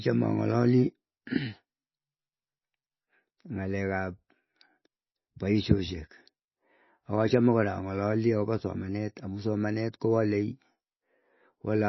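Right through, the speech is dull with nothing above 5.8 kHz and a watery swirl, likely heavy MP3 compression at a rate near 24 kbps.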